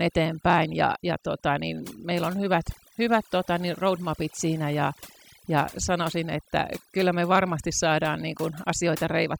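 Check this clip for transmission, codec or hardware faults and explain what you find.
One fault runs through the whole clip: overdone noise removal, a processing fault applied to the speech rather than damage in transit. A noise reducer set far too aggressively cuts individual frequency bands down or out whenever they sit near its noise estimate, taking the quieter parts of the voice with them. The background collapses into near silence dotted with twinkling specks. Unlike low-bitrate codec swirl, the damage tracks the noise floor and leaves unnaturally dead gaps, not smeared, band-limited sound.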